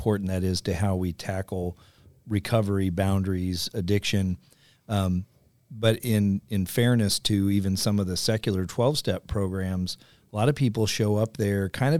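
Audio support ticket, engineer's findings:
Nothing stood out on listening; no findings to report for this speech clip.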